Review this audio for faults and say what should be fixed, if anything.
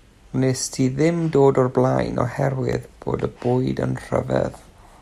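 Regular clicks recur about every 1.01 s from 0.72 s to 4.74 s, roughly five in all, and the likely cause is clock drift buffer slips. Two devices running on separate clocks that disagree by several hundred ppm let the buffer creep until a few tens of samples are dropped or repeated, leaving a small discontinuity. Unlike network dropouts or dropped-frame glitches, these land at a steady interval and leave no audible gap. To prevent this, lock both devices to one clock or add adaptive resampling.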